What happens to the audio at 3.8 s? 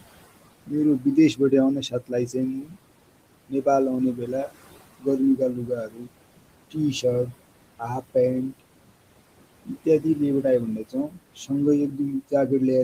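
At 3.8 s you're inside a stretch, running from about 3.48 to 6.13 s, where the noise suppressor cuts into the speech itself. It mistakes some of the speech for background and pulls it down along with the noise, by about 22 dB at the worst point. Only part of that span is hit, roughly three-quarters of a second in total, so you hear soft consonants and word endings going faint or swallowed rather than a full dropout.

Under that, you also get the noise suppressor artifacts that run through the whole recording. The suppressor treats steady room noise, which sits about 15 dB below the speech, as something to remove band by band, frame by frame, knocking it down by about 21 dB. So the background ducks in the gaps and comes back up under the talking.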